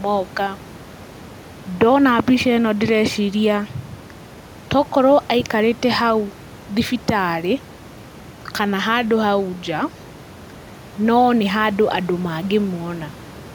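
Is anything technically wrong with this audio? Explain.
No, nothing is technically wrong with this recording.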